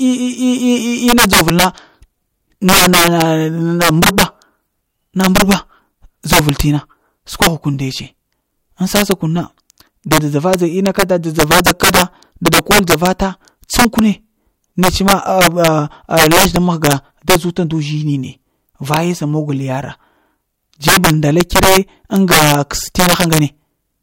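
Integer overflow runs through the whole speech clip. The signal was pushed about 11 dB past full scale. Peaks that should have been limited instead wrapped to the opposite sign. Around 2 percent of samples flip this way. Loud syllables break into violent cracks, far harsher than clipping.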